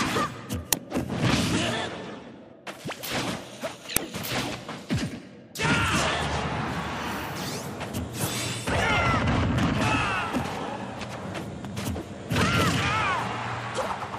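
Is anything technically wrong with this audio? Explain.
Yes, there are two uninitialised buffer glitches, at 0.73 s and 3.97 s. Each is a sudden, loud crack of raw digital noise. Audio buffers got handed to the output before anything was written into them, so whatever junk was sitting in memory played as samples. The first burst lasts about 5.8 ms, which fits a 256-sample buffer. The second is about 2.9 ms, consistent with a 128-sample one.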